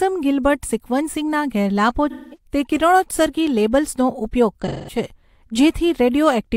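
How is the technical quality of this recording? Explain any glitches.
Two glitches in the speech come from AAC frame loss with concealment. At 2.10 to 2.37 s and 4.60 to 4.98 s, about 213 ms of coded audio goes missing each time, which fits five lost frames. The decoder patches each gap from the last good spectrum, producing a brief smeared, noisy, phasey stretch.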